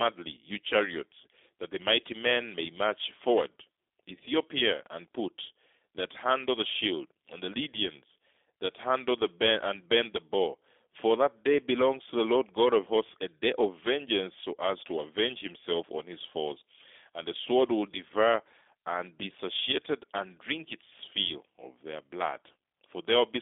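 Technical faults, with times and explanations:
Throughout, G.729 codec: low-bitrate VoIP coding rebuilds the speech from a vocal tract model and sparse pulses, leaving it plainly rough and synthetic, with nothing above 3.8 kHz.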